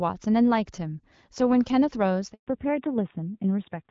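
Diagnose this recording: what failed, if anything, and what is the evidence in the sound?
At the network stage, the call was handed from one link to another and no speech frames arrived during the switch. This handover gap shows at 2.33 s. The speech decays within a few tens of milliseconds and stays silent until 2.47 s, about 140 ms in all, before the new link begins delivering audio. Whatever was said in that window is lost outright rather than smeared or concealed.

In the codec stage, the call then fell back to narrowband. From 2.47 s to the end, nothing is left above 4 kHz. Before the handover, the speech carries the fuller band of AMR-WB (HD Voice) with only light coding roughness, at a quality that fits about 12.65 kbit/s. After the handover it turns duller and grainier, which suggests the older AMR-NB codec at a low rate around 7.4 kbit/s replacing the wideband path.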